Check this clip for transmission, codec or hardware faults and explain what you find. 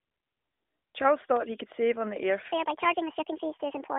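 Two faults stand out in this speech, heard over a narrowband mobile channel limited to roughly 250 Hz to 3.6 kHz, which fits the AMR narrowband mobile codec in its 12.2 kbps mode.

From 1.36 to 1.39 s there is a loud pop, a single sharp crack peaking about 10 dB above the speech, while the talking carries on beneath it. It is likely caused by a sudden voltage step or spike entering the signal path, such as a connector being disturbed, a switch, or a static discharge. The following circuitry turns that step into a brief, hard transient.

From 2.52 s to the end, the speech becomes a section at the wrong speed. It sounds hurried and chipmunk-like, with pitch jumping up about seven semitones at the changeover. The audio plays 1.53 times faster than it was recorded, likely because this part was run against the wrong clock rate during editing or playback. Since speed and pitch are tied together, the voice rises and rushes at the same moment.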